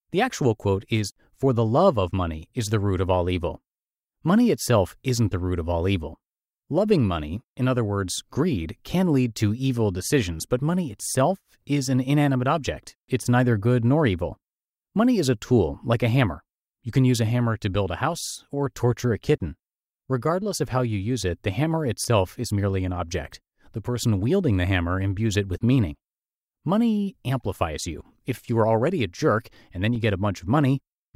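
At 22.04 s and again at 29.95 s the speech drops into a block of digital silence, about 5.3 ms and 2.7 ms long, which fits a 256-sample and a 128-sample buffer going unfilled. Each hole opens and closes abruptly, so it sounds like a single sharp tick. On a waveform the trace snaps to a flat line near zero, and a spectrogram shows a thin vertical broadband stripe at each edge.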